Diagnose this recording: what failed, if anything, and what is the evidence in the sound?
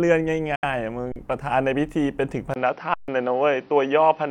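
At 0.55 s the sound cuts out completely for about 90 ms, until 0.64 s. It then resumes later in the sound, as if playback had continued through the hole, which fits a few lost packets. This is a playback-stage fault on the wireless link, likely a Bluetooth dropout. On the waveform it appears as a clean block of silence, and on the spectrogram as a full-height vertical gap.

Two underruns with a held sample occur in the driver or buffer stage. The first runs from 1.12 to 1.16 s, about 40 ms, and the second from 2.94 to 3.08 s, about 141 ms. In each, the output buffer emptied and the converter held its last value. The waveform goes flat, so the sound stops with little or no click. Live audio went missing during each stall. On the spectrogram, each gap shows as an empty column.

From 2.54 s to the end, the capture stage changes character after a roughly 20 ms silence. Nothing remains above 5.9 kHz, the level shifts by about 5 dB, and a new noise floor sits about 40 dB below the signal, so the sound turns duller and boxier. 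This is likely an input switched to a poorer device. The spectrogram shows a sharp ceiling at 5.9 kHz from that point on, with a thin gap where the switch happens.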